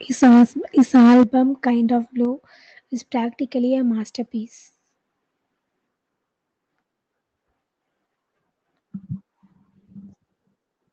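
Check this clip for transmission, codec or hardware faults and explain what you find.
Two hardware-side faults are audible in this speech clip, both at the microphone end: a short burst of microphone overload and three sudden microphone volume step-downs, all within the first few seconds. The audio also carries the band-limited, slightly grainy character of the Opus call path, with nothing above about 8 kHz.

From 0.77 to 1.23 s the loudest syllables turn harsh and crackly, with a flattened, buzzy edge where the peaks should swell. This is most likely microphone overload. The input volume was set so high that the signal tried to go about 7 dB past the converter's ceiling, so the waveform tops were sheared off, roughly a third of the samples in that stretch. The squared-off peaks add the distortion heard on those syllables.

At 0.24, 1.23 and 2.25 s the whole signal, voice and background alike, suddenly drops in level in a single step rather than a fade: about 2 dB at the first point, about 8 dB at the second and about 4 dB at the third. 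The pattern is likely the call software's automatic gain control reacting to the hot input and cutting the device's microphone volume. The largest drop at 1.23 s comes right as the clipped burst ends, a direct response to that overload.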